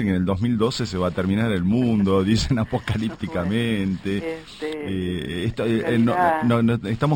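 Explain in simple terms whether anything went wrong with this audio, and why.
Imaging from linear upsampling runs through the whole clip. The sound seems to have been raised to a higher sample rate, likely from 12 kHz to 48 kHz, by joining samples with straight lines. That dulls the top and leaves faint mirror copies between 6 and 12 kHz, heard as a thin metallic shimmer.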